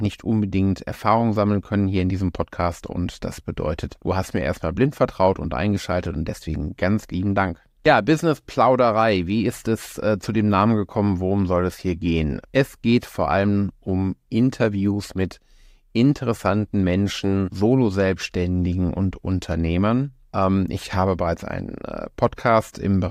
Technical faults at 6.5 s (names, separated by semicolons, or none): none